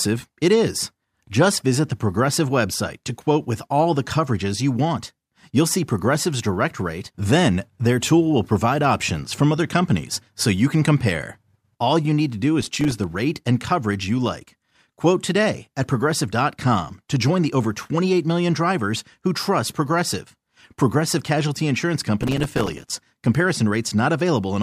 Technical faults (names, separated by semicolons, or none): processor overload crackle